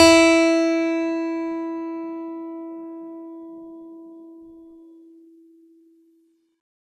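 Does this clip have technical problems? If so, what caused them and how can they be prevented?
Yes. Across the whole music clip there's generation loss: a swirly, hollow smear, soft blurred attacks, and nothing above about 16.1 kHz. That's likely from the audio being decoded and re-encoded around five times through a lossy codec, and the character fits repeated MP2 passes at 128 kbit/s. Each pass quantises again on a shifted frame grid, so the noise and spectral holes pile up beyond what one encode would leave. To prevent it, keep a lossless master and encode to a lossy format only once, at the final step.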